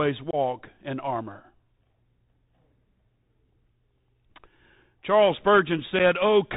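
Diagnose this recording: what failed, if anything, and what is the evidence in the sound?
The failure is at the codec stage: the speech runs through a Bluetooth CVSD headset codec. Nothing above 4 kHz survives. Sibilants sound scratchy. Loud bright sounds distort, and a granular hiss sits underneath. This fits a 64 kbps one-bit delta link whose adaptive step cannot keep up.

The second failure is on the wireless link: unconcealed Bluetooth headset packet loss. A 22.5 ms hole at 0.31 to 0.35 s fits roughly three lost packets. A 7.5 ms gap at 5.99 s fits about one. Silence or an idle pattern filled each gap. The edges are abrupt, and the speech returns briefly quieter.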